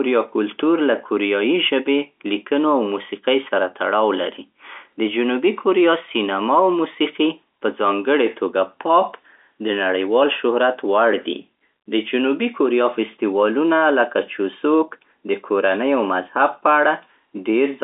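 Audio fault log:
No faults are audible in the speech. The G.711 telephone coding confines it to a line band of roughly 300 Hz to 3.6 kHz, with nothing above about 3.8 kHz.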